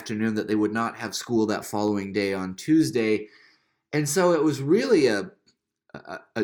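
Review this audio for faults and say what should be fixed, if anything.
Three sharp clicks sit in the speech at 0.78 s (after "that they would"), 1.88 s (before "day on") and 5.02 s (after "so it was"). These are most likely dropped samples: the stream skips a handful of values, around a tenth of a millisecond, so the waveform steps abruptly and a thin vertical line crosses the spectrogram at each time. Keeping the capture and playback buffers large enough that they never underrun would prevent this.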